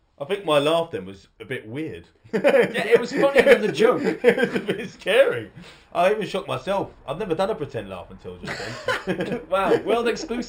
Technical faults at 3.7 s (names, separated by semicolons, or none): imaging from linear upsampling